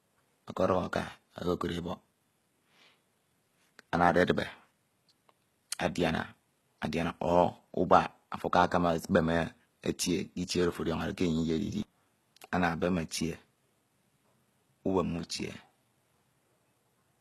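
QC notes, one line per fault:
Throughout: HE-AAC compression. Nothing is present above 12.3 kHz. The treble sounds bright but synthetic, and s sounds come out gritty and lispy. The likely cause is HE-AAC at a very low bitrate, which fits roughly 16 kbps. Only the lower spectrum is truly coded. The upper band is rebuilt by copying lower bands upward under a coarse envelope. Its harmonics fail to line up with those below, so the damage is plainly audible on the speech.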